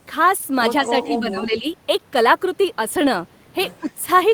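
At 0.37 and 0.41 s, two back-to-back short concealed packet losses each replace about 20 ms of missing audio with extrapolated sound, giving a brief smear. On a spectrogram, the gap is filled with sound continued smoothly from just before it instead of moving naturally.

From 0.80 to 1.67 s the speech dips in pieces, for roughly 0.7 s in total and by about 10 dB at its deepest. This is likely speech suppressed in double talk, with the canceller turning the talker down. The waveform shows notched, uneven envelope drops.

From 3.80 to 3.92 s a faint copy of the speech trails it by 160 ms, about 30 dB down. This is likely an echo leak, loudspeaker pickup the canceller missed. On the spectrogram it appears as a weak, delayed repeat of the harmonic pattern.

Overlapping that, from 3.81 to 3.88 s, the speech briefly ducks by about 5 dB, likely a second, shorter double-talk suppression. It shows as a small dip in the waveform envelope.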